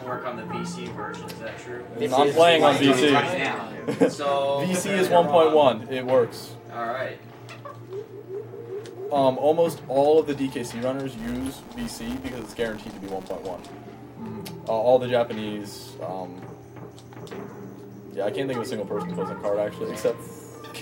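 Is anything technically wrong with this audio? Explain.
Yes. From 11.18 s to 13.71 s there is a filter restarted on every block. The filter discards its internal state at each block boundary and begins processing from silence, so every block opens with a small transient. Those transients repeat at 188 Hz, which fits a 256-sample block, and are heard as a regular buzz at that rate whose loudness follows the level of the audio passing through.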